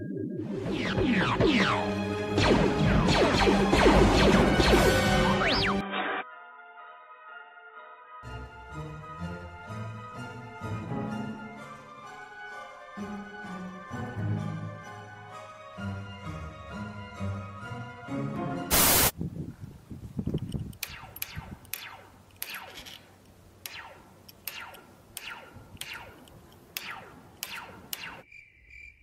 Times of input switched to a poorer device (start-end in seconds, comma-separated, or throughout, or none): 5.81-8.23